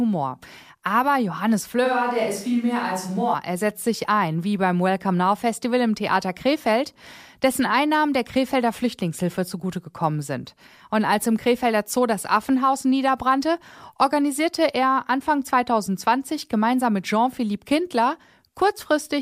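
A short speech recording with one fault: a switch to a distant microphone from 1.86 to 3.33 s. For that stretch the voice turns suddenly roomy and hollow, with thinner bass. The level stays roughly the same. Background noise sits around 35 dB below the speech. The change in and out is abrupt. The likely cause is that the close microphone's signal dropped out and a farther pickup, such as a camera microphone, filled in briefly.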